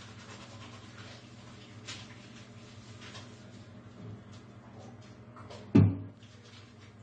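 A recording of sounds that is dull and smeared from start to finish, with nothing above 9 kHz and a warbling, fizzy texture on sustained and hissy sounds. This is likely AAC compression damage, consistent with AAC-LC at a low bitrate around 32 kbps.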